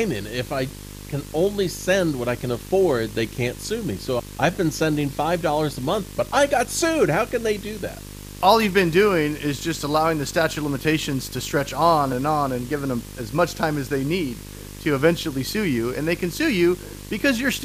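From start to finish the speech carries video or display buzz: interference from a screen or video cable leaking into the audio path. It shows up as a coarse buzz at the 50 Hz field rate, with gritty hash riding above it and a very high whine at about 15.6 kHz from the line scan. The interference sits roughly 15 dB below the speech, so it stays audible in every pause.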